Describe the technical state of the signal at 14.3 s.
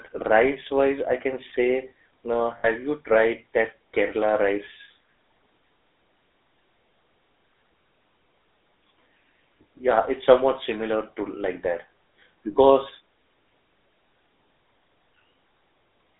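At 14.3 s the speech is still passing through the GSM full-rate codec, as it does throughout: the vocal tract is modelled and driven by sparse, regularly spaced excitation pulses at a rate that fits 13 kbps, within a 300 Hz to 3.7 kHz band, leaving a plainly audible buzzy, gravelly roughness.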